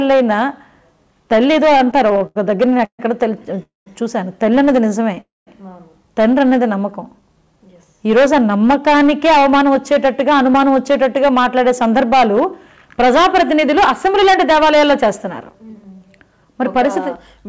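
From 1.78 to 3.01 s you get repeated stalls, a stutter. The packets kept turning up late, so the jitter buffer kept running dry, nine times in that stretch. Each time the receiver held the last sound going until it could carry on, the longest hold about 141 ms and roughly 330 ms filled in all, about a quarter of the span. Nothing is lost, but the sound drags and hiccups along.

At 3.63 to 3.88 s there's a call audio freeze. The sound smears into a brief held buzz that fades and then drops to silence for about 160 ms, about 234 ms of inserted gap in total, before picking up exactly where it left off. The likely cause is packets held up in transit, emptying the buffer, so the audio is pushed later by that amount rather than losing anything.

At 5.15 s there's a short stall from a late packet. One packet missed its slot and the receiver stretched the last bit of sound by about 17 ms until it showed up, so you hear a tiny held moment with a faint buzz or dip.

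Right after that, 5.21 to 5.49 s, comes a second call audio freeze: another fading held sound, then about 200 ms of silence, with about 261 ms added before playback resumes from the same spot. It's likely the same kind of in-transit hold-up as before.

From 6.49 to 7.86 s the jitter buffer slows playback down. With its reserve running low or its target delay just raised, it repeated single pitch periods and bits of pauses over and over, adding about 127 ms and running at about 91% speed. The pitch stays put, but everything sounds drawn out.

Then from 9.3 s to nearly the end, the jitter buffer speeds up. It had built up more audio than it wanted, so it kept snipping out short pitch-period-sized pieces, about half a second in total, and plays at about 106% speed. Same pitch, but the sound feels a little rushed. Underneath it all is the call codec's band limit, with nothing above 8 kHz, which fits G.722.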